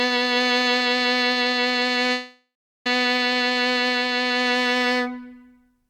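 A music clip with a call audio freeze from 2.12 s to 2.87 s: the last sound is stretched into a fading tone that falls to about 0.4 s of silence, then the music resumes exactly where it stopped. The likely cause is delayed packets draining the jitter buffer. Unlike a dropout, nothing is skipped; the music is simply pushed about 0.73 s later.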